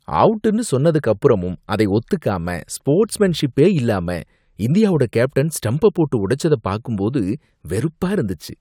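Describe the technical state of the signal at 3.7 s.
At 3.7 s the speech signal is intact, with no fault audible at that moment.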